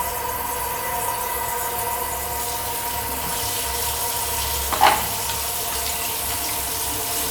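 No technical faults are audible anywhere in this recording of sounds.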